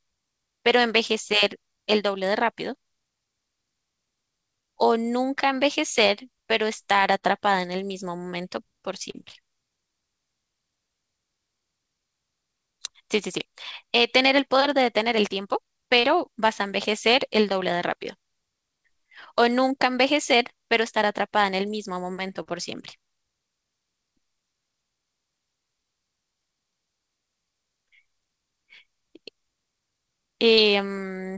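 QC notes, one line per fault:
7.19–7.25 s, 9.11–9.16 s, 16.00–16.06 s, 22.42–22.48 s and 30.55–30.60 s, short concealed packet loss: each time about 30 ms of audio arrived too late, so the receiver filled the hole by carrying the previous sound forward and blending back into the real signal, leaving a brief smear or wobble. Unlike a hard dropout or click, there is no silent gap and no sharp edge, just a blurred instant within the call audio, whose band stops at 8 kHz.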